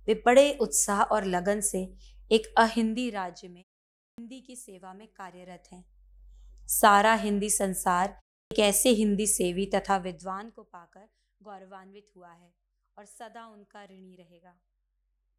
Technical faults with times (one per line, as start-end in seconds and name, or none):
2.65-3.65 zipper noise
4.10-4.18 clipped start after a pause
5.34-6.32 zipper noise
8.43-8.51 clipped start after a pause
9.85-10.70 zipper noise